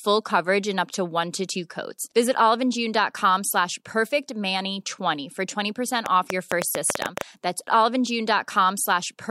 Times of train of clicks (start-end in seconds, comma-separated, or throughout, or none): 6.06-7.22